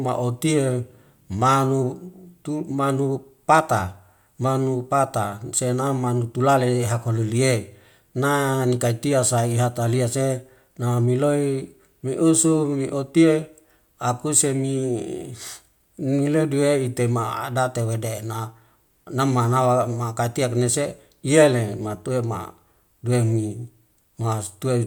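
No technical faults occur at any point in the speech, so there is nothing to describe in time order.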